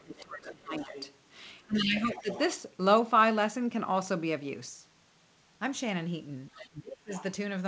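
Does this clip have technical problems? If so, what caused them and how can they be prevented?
Yes. Speech suppressed in double talk appears from 0.0 to 0.95 s, 1.65 to 2.29 s and 6.56 to 7.11 s. The speech sinks by roughly 20 to 30 dB, likely because the echo canceller turned both sides down during overlap. Unlike a network dropout, these dips coincide with the second voice. Tuning the canceller for double talk with gentler suppression prevents it.

The other side's voice leaking through is a quieter second voice, roughly 15 to 30 dB under the main speech, at 0.18 to 1.14 s, 1.76 to 2.39 s, 6.54 to 6.68 s and 7.14 to 7.23 s. It is likely loudspeaker playback the canceller failed to remove. Unlike room crosstalk, it clusters around the suppression dips. Headphones prevent it.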